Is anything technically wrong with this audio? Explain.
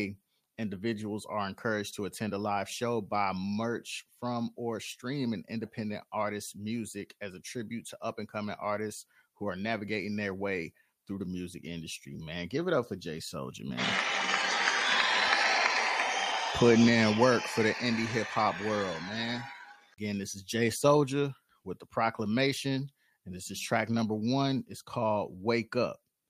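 No, no technical faults.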